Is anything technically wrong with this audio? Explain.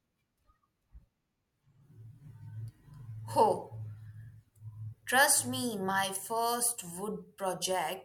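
No technical faults are audible.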